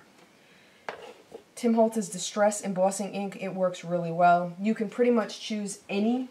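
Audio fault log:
Nothing stood out on listening to this audio.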